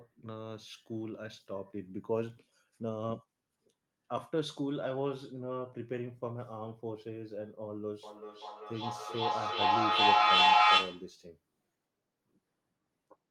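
A speech recording with a feedback howl from 8.03 to 11.15 s. A tone near 1 kHz swells until it sits about 12 dB above the speech. It pulses roughly every 400 ms. Two devices in the same room are joined to one call. Each pass from microphone to loudspeaker and back adds level. The loop favours that one frequency, so the repeats grow and narrow into the howl. The pulse rate reflects the loop's delay.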